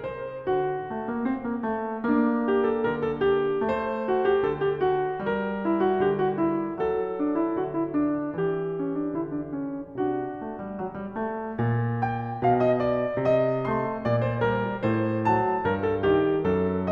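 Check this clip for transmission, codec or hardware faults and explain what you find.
Listening through the music, nothing stood out as a transmission, codec or hardware problem.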